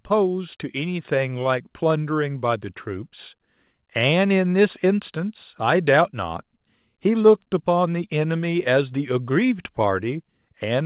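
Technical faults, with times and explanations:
1.02 s, microphone volume stepped up: the call software found the input too quiet and raised the device's input volume in one step of about 5 dB. Voice and background noise jump together, unlike a talker moving closer, which would lift the voice alone. The telephone-band call path cuts everything above 4 kHz.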